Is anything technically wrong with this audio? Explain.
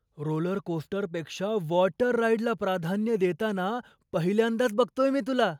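No, nothing technically wrong stood out on listening to this speech recording.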